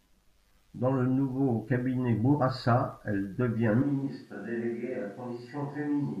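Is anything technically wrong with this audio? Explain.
Yes. From 3.82 s, right after "elle devient", to the end, the speech suddenly turns roomy and hollow, loses bass, drops by about 10 dB, and gains a room-noise floor roughly 35 dB below the speech. This is a switch to a distant microphone, likely because the close microphone dropped out and a farther one took over. A plain gain drop wouldn't add room sound, and added reverb wouldn't thin the low end or raise background noise this abruptly.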